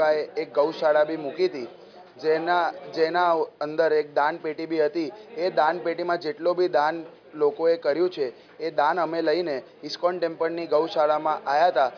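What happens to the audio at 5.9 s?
Nothing goes wrong at 5.9 s; the audio plays through that moment intact, with no dropout, click, distortion or other fault.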